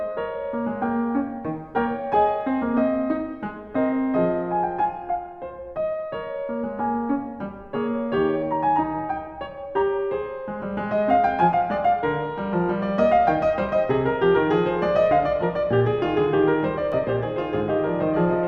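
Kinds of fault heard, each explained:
Doubled audio track: from 16.92 s to the end, the music is joined by a second full-band copy trailing about one and a half seconds behind and roughly 5 dB quieter, cutting in abruptly with no decay or room colour, likely from a slower parallel capture path.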